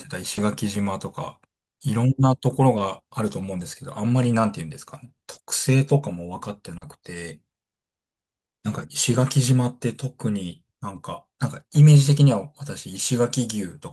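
Scattered short gaps run from 0.35 s to 10.97 s in this speech: about three brief dropouts, the longest roughly 40 ms, with 80 ms missing in total. The receiver papered over each hole by extending the preceding sound, leaving brief ticks and smeared hiccups.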